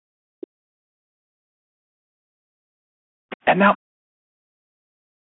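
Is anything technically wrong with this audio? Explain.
Yes. Speech suppressed in double talk appears from 0.18 to 2.24 s, 3.75 to 4.17 s, and 4.42 s to the end. The likely cause is the echo canceller failing to separate the talker from loudspeaker echo while both sides spoke, so it pulled everything down. The voice sinks by something like 40 dB.

Background gated by the echo canceller, from 2.52 to 3.3 s: with the loudspeaker active, the canceller clamped the microphone hard. The room sound drops by about 40 dB for most of that span, then comes back once the gate releases.

Other side's voice leaking through, at 3.3 to 3.37 s: a brief scrap of a second voice, roughly 20 dB under the talker, slips in just as the gating lets go. It is likely loudspeaker playback that the canceller did not fully remove from the microphone. The call's high-pass filter, which takes out the lowest bass, is expected.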